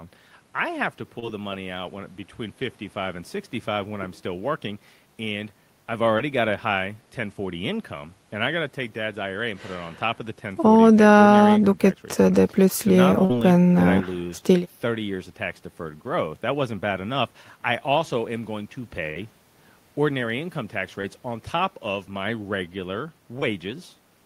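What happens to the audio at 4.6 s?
Nothing goes wrong at 4.6 s; the speech there plays through intact, with no dropout, click, glitch or distortion.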